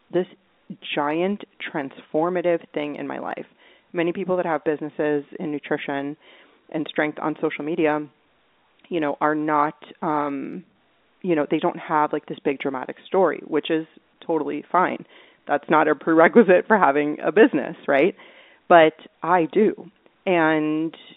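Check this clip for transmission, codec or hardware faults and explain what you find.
No transmission, codec or hardware faults found; the speech sits in a telephone band of roughly 250 Hz to 3.7 kHz, as expected from ordinary G.711 telephone coding, with at most a faint level-following quantisation hiss.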